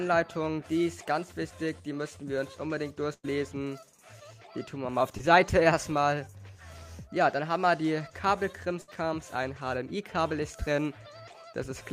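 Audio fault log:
3.13–3.25 s and 8.81–8.90 s, burst of packet loss: Two runs of audio failed to arrive in time for playback. About 100 ms went missing in the first and 60 ms in the second. The receiver bridged each gap by extending the last sound it had, letting that copy fade as the gap went on. This gives a held, dimming smear. Playback then picks up later than it broke off, so the material in between is gone.
5.17–5.21 s, short concealed packet loss: About 20 ms of audio never reached the decoder in time. The receiver extended the preceding sound to cover the hole, then crossfaded back into the real signal. Because the patch is so short, it comes across as a brief smear or wobble rather than a clear dropout.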